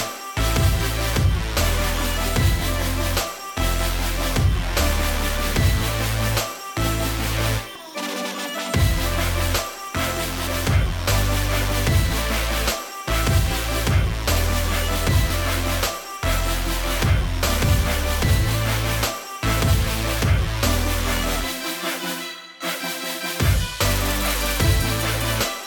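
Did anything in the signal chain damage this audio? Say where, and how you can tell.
Yes. Forward skips with no silence at 7.76, 10.47, 15.30 and 21.36 s point to a likely dropped buffer (overrun) at the driver stage. Unread samples were overwritten, and the remaining audio was spliced together.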